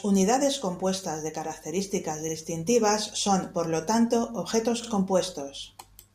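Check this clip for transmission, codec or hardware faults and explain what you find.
The clip has one fault, overlapping chunks, at two joins. From 2.29 to 2.34 s and again from 4.84 to 4.89 s, each new 2.5-second chunk starts 50 ms before the previous one ended. That 50 ms of speech plays twice, heard as a brief stutter or click at each join, 2.5 s apart.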